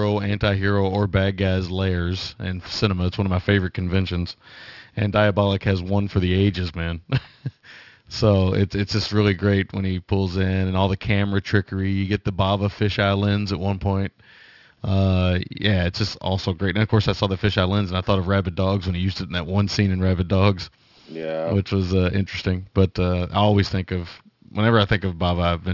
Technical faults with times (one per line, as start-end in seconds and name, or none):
0.00-25.73 aliasing